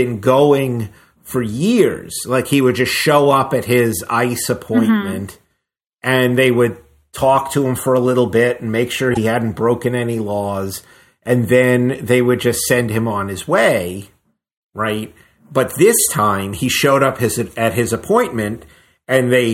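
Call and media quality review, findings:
Corrupt frame decoded: bit errors in compressed frames, decoder played them anyway, so wrong gains and codes put energy at wrong frequencies. Brief faint glitch at 5.28 s, a single frame. Louder glitch 9.09–9.18 s, around three frames, peaking near about -5 dBFS.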